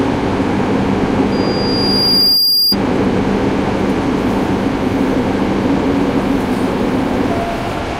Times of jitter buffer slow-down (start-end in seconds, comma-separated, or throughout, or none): none